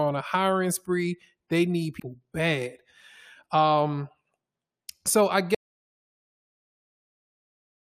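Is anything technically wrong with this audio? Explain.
Yes. There are two faults in this speech clip.

At 1.99 s there is damaged data in the compressed stream. A short stretch of the encoded file is corrupt. The decoder cannot read the frames there. It loses sync and hunts for the next valid frame header. The result is a brief glitch lasting about 14 ms.

At 5.55 s, just after "so I", there is an audio dropout to silence. The speech stops mid-flow and never returns. The last 2.26 s, up to the end, are silence with no room tone. The likely cause is a lost input, such as a disconnected device or a failed link, while the recorder kept writing silence. Whatever followed is gone.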